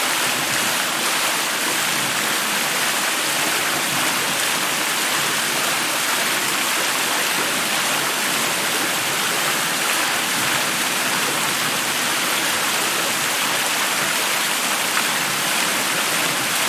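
No technical faults are audible.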